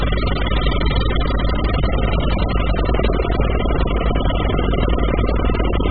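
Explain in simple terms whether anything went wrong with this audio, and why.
Heavy AAC compression runs through the whole clip, likely from a very cheap encode. Nothing above 4.8 kHz survives, so everything sounds dull and smeared.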